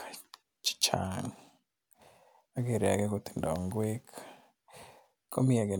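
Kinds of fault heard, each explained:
No faults detected in the speech recording.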